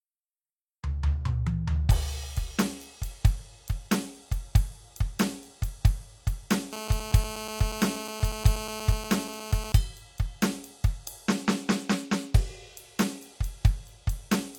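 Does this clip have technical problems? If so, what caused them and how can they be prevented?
Yes. From 6.73 to 9.72 s there's GSM phone buzz over the music: a hard, raspy buzz at about 217 Hz, with lots of harmonics, sitting about 11 dB below the music and holding steady, as it would during a call. A 2G handset close by transmits in bursts 217 times a second, and something in the audio chain rectifies those radio pulses into audible sound. Keep phones off or in flight mode and well away from the recording gear and cables.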